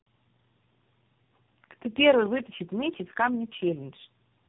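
Throughout, tandem speech coding: repeated decoding and re-encoding, apparently through three speech codecs, compounds roughness and warble beyond any single low-rate codec, with nothing above 3.8 kHz.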